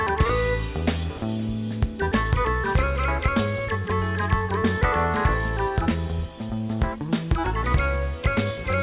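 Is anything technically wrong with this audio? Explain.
Yes. From 1.18 to 1.22 s, 40 ms of sound gives way to steady comfort noise, likely sound dropped by the voice detector after it mistook that moment for background. The waveform shows a brief low, even patch, and the spectrogram a faint featureless band.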